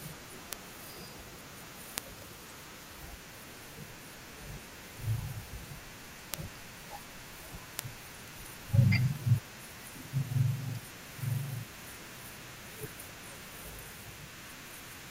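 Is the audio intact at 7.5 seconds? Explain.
No. Word clock ticks run through this moment. They span from 0.53 s to 15.07 s, so 7.5 s falls inside. The speech is crossed by short, sharp clicks about every half second, around thirty in all, some louder than others. The receiving device is running on its own clock rather than locking to the sender's. Each time the two clocks drift a sample apart, one sample is dropped or doubled. That pattern fits a clock mismatch of roughly 50 parts per million.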